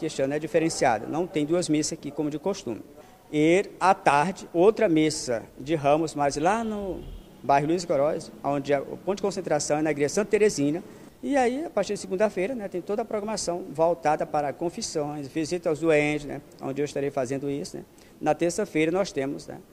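No technical faults are audible anywhere in the audio.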